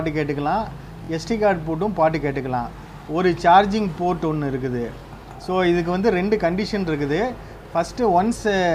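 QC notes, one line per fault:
1.05 to 1.09 s, repeated buffer: a 23 ms piece plays three times in a row, which fits a 1024-sample buffer replayed when new audio arrived late. Hard joins give a short stutter. The waveform shows identical copied blocks; the spectrogram shows thin vertical lines at each seam.
4.99 to 5.02 s, repeated buffer: the same 23 ms length, played twice this time, so one hard join makes a brief stutter or click. The waveform shows one duplicated block with a step at the seam; the spectrogram shows a single vertical line there.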